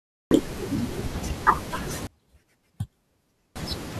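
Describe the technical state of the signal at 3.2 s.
At 3.2 s the speech collapses by about 34 dB, from 2.07 to 3.56 s, likely from one channel inverted cancelling the centred content in mono; the waveform shrinks and the spectrogram fades.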